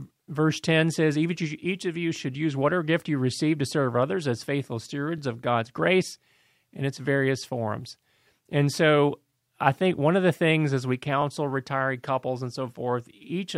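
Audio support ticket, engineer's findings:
Overlapping chunks at 2.16–2.18 s, between "says each of you" and "use whatever gift you". Short stutter at the join. About 20 ms of speech plays twice. Chunked processing stage, 3.0 s chunks. Each chunk starts before the previous one ends.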